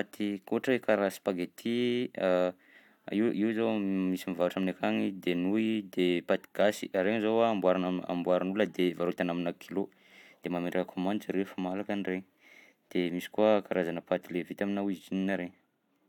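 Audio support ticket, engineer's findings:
No findings: no audible faults anywhere in the speech audio, and no component implicated.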